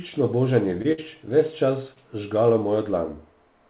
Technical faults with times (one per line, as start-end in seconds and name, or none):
0.82-0.86 short concealed packet loss
0.92-1.00 burst of packet loss
1.94-1.98 short concealed packet loss